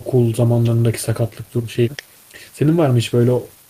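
No technical faults can be heard anywhere in the speech.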